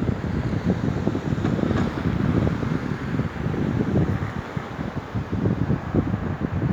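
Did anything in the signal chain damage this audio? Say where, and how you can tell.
Yes. A train of clicks runs from 0.07 to 1.27 s: roughly fifteen near-identical pulses at a regular 11 per second, peaking about 5 dB above the sound. The steady, uniform ticking, unlike random crackle, points to likely interference entering the analogue wiring or interface.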